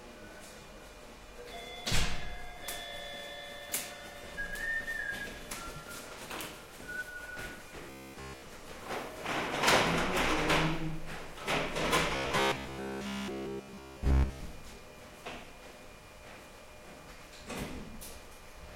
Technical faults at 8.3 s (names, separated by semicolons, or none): robotic sound from repeated short buffers